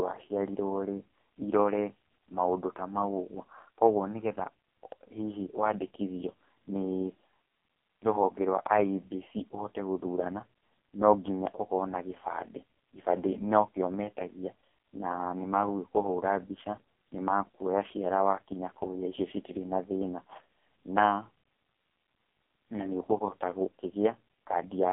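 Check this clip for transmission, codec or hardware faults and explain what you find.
One fault runs through the whole recording: AMR narrowband mobile codec damage. Throughout, the speech is confined to a phone-line band of 250 Hz to 3.4 kHz, with nothing above 3.5 kHz. The codec rebuilds each frame from a vocal-tract model driven by a few pulses, so the speech sounds heavily buzzy and synthetic, which fits AMR-NB's lowest 4.75 kbps mode. A spectrogram would show a hard ceiling near 3.5 kHz and an empty floor below 250 Hz.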